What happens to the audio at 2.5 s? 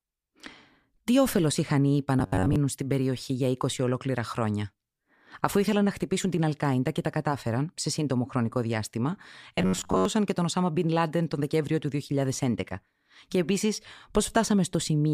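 Robotic sound from repeated short buffers runs from 2.20 to 2.56 s, just before "στην περιοχή". The speech turns into a rigid, metallic buzz at about 94 Hz that still loosely tracks the words. The likely cause is audio arriving too seldom, so playback keeps looping a fragment of roughly 10.7 ms, which fits that buzz, in place of about half the real signal.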